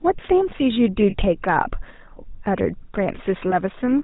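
GSM full-rate codec damage runs through the whole speech clip: the vocal-tract model with sparse pulse excitation and nothing above 4 kHz leaves a buzzy, gravelly roughness, consistent with a 13 kbps full-rate encoder. Lost GSM frames at 1.10 s (about 40 ms) and 3.50 s (about 20 ms) are concealed by repeating the last good frame's settings, giving a brief rough, metallic ring.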